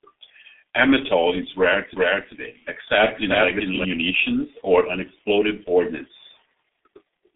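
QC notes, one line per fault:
Throughout, G.723.1 codec: the audio is squeezed into a narrow telephone band, roughly 250 Hz to 3.6 kHz, with nothing above 3.8 kHz, and is coded at about 6.3 kbit/s. The coarse 30 ms frames and slow voice model make it muffled and hoarse, with smeared consonants. It is set apart from simple low-pass filtering by that heavy coding damage.
1.97 to 3.85 s, doubled audio track: just after "is rare", a second, full-band copy of the audio runs alongside at roughly equal level, trailing by about 0.4 s, and then cuts in and out abruptly. It has no decay or room colour, so it is not reverb or an acoustic echo. A second capture or an out-of-step edit is the likely cause.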